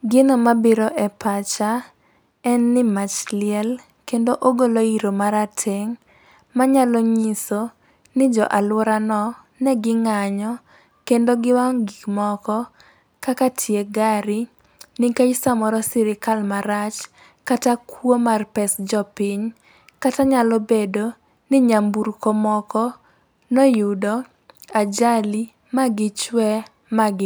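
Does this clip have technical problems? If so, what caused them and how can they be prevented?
No, there are no technical problems to report here.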